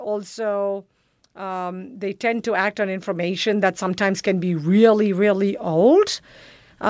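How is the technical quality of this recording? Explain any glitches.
The recording carries one gain glitch, with the speech passing through call microphone processing that limits content to below 8 kHz. From 1.36 to 4.72 s, automatic gain rising lifts the level by about 13 dB as the control compensates for a quiet input, so voice and background swell together.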